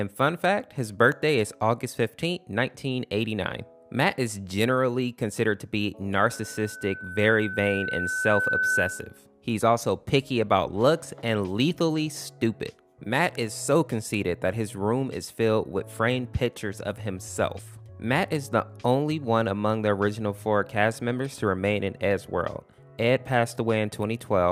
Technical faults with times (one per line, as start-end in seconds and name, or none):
6.17-9.19 loudspeaker feedback squeal